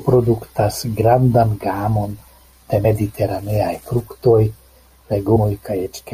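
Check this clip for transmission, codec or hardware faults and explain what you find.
Two brief breaks interrupt the speech, at 2.84 s and 5.35 s, each followed by a jump forward in the sound. These are compressed frames skipped: whole frames never reached the output, missing from the stream or rejected by the decoder as damaged. The first jump drops roughly 40 ms, the second roughly 150 ms, which fits losing about two and about seven frames of 21.3 ms.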